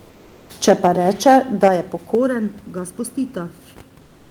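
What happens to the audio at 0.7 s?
From 0.68 to 0.87 s the speech turns harsh and crackly, with flattened, buzzing peaks on roughly one sample in twenty. This is likely microphone overload: input driven about 5 dB past the converter's ceiling, so the tops of the loudest waveforms are sheared off.

At 0.69 s, right as that distortion begins, speech and background both drop abruptly by about 3 dB. The likely cause is the microphone volume being stepped down, with the call software cutting input gain in one jump after detecting the clipping peak.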